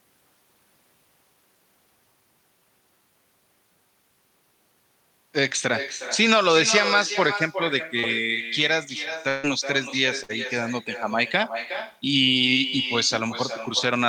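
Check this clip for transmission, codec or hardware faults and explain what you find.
Three kinds of transmission fault are audible in the speech: an echo with no canceller running throughout, one short concealed packet loss, and two bursts of packet loss.

The echo is a thinner copy of every phrase, trailing about 9 dB below the speech by around four tenths of a second. The far end's loudspeaker is feeding its microphone, and no echo canceller strips that pickup before it returns across the network.

From 7.99 to 8.05 s there is a brief smear where roughly 40 ms of audio never arrived. The decoder covered about 34 ms of it by extending the preceding sound, then crossfaded back into the real signal, so a short sound may be lost there.

At 9.29 to 9.45 s and again at 10.23 to 10.31 s, the sound stretches into a held, fading continuation, then jumps ahead with material missing. These are bursts of packet loss of about 140 ms and 60 ms. 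Concealment repeated the last sound at a dropping level until real packets resumed.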